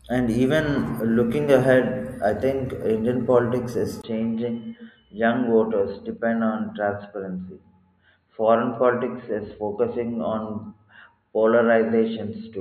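From 4.02 s to the end, the speech turns dull and boxy with nothing above 4.3 kHz, after a brief 20 ms gap, likely from the input switching to a poorer device.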